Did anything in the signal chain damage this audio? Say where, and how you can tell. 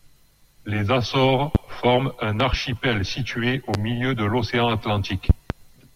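Yes, there are four loud pop events, likely from a loose plug or static putting voltage steps into the analogue wiring. They're single at 1.55–1.58 and 3.74–3.77 s and double at 2.40–2.56 and 5.30–5.53 s, jumping roughly 15 to 20 dB above the speech, which carries on underneath.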